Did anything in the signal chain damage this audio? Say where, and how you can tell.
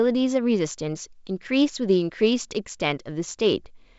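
No, nothing in the chain damaged this speech; it carries the wideband band-limited character of G.722 telephone coding, consistent with the full 64 kbit/s mode, with only the faint upper-band hiss that this coding normally leaves.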